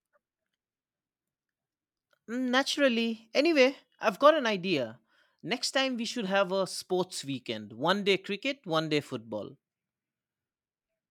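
Nothing technically wrong turns up anywhere in this speech recording, so there's no fault to point to and no time worth flagging.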